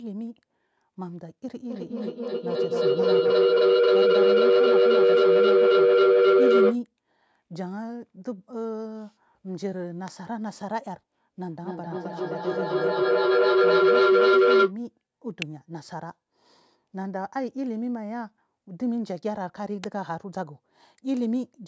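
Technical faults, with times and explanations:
1.58–6.82 s and 11.49–14.78 s, feedback howl: a loop between two devices keeps gaining, building into a tone near 400 Hz, about 11 dB above the speech, repeating every 300 ms or so.
10.08 s, 15.42 s, 19.84 s, electrical switching spike: sharp snaps laid over the speech, likely arcs from a nearby switch or motor, unlike the howl's sustained, growing pitch.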